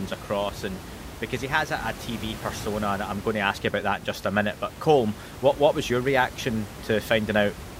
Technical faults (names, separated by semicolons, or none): none